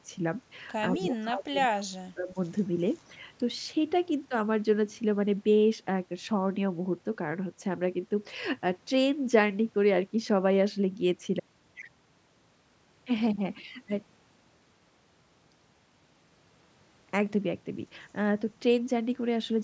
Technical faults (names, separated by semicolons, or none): speech suppressed in double talk; echo leak